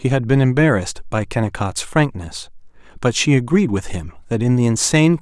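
Listening to the speech in the clip, nothing stood out as a technical problem.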